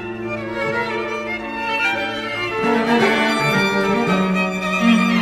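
No faults detected anywhere in the clip.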